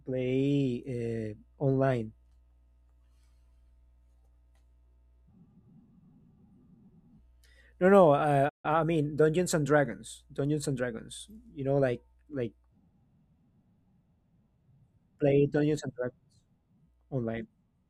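A playback stall interrupts this speech recording at 8.49 s, most likely because the player ran short of buffered data or had its output thread blocked for a moment. The speech cuts out abruptly mid-flow and the output drops to silence for about 150 ms, until 8.66 s, after which the talking resumes. The gap sounds like the audio briefly freezing before carrying on.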